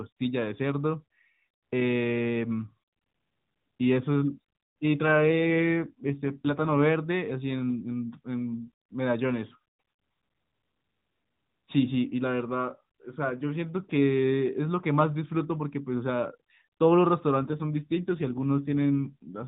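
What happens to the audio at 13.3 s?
Nothing goes wrong at 13.3 s: the speech continues intact through that moment, carried by the narrowband AMR mobile codec at 12.2 kbps, which keeps everything below 4 kHz and leaves only light coding texture.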